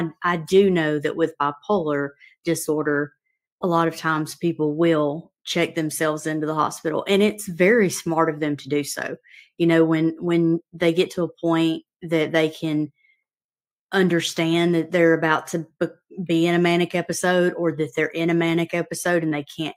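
Nothing in this audio stands out as a technical fault at any point, so there's really nothing to flag here.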